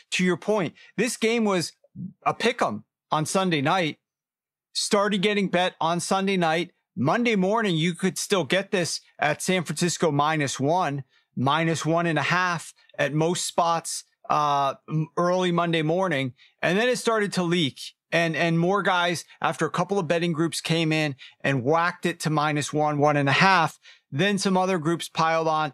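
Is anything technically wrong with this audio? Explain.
Yes. From 22.99 to 23.71 s the speech and background noise step up together by about 4 dB: a sudden gain jump, likely digital gain applied instantly without a ramp.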